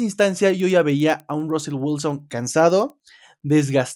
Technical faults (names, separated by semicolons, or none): resampler restarted on every block